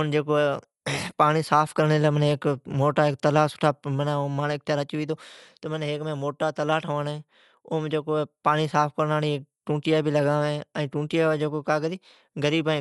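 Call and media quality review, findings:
Dull, band-limited speech throughout, with rough fluttering noise around voiced harmonics. Likely Dolby Digital compression at a low rate, fitting roughly a 64 kbps stream. Encoder narrowed the band and left many frequency lines without mantissa bits, so the decoder filled them with dither noise. Damage plainly audible. Spectrogram: hard ceiling, nothing above 11.5 kHz; speckled, smeared noise filling gaps between harmonic lines. Waveform: no obvious clipping or dropouts.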